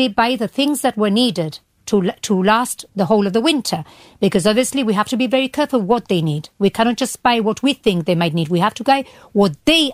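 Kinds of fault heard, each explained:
No faults detected; the speech shows no audible defects on any path.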